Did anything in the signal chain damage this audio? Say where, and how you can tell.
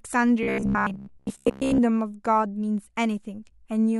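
Yes. From 0.43 to 1.80 s the speech turns into a rigid, metallic buzz near 66.7 Hz that still loosely tracks the syllables. This is robotic sound from repeated short buffers, likely a driver or buffer-stage underrun. A 15 ms block gets replayed while real audio is skipped, and that fits the buzz rate. Roughly most of that stretch is repeated material. A spectrogram shows evenly spaced harmonic lines at multiples of 66.7 Hz. The waveform shows identical 15 ms cycles.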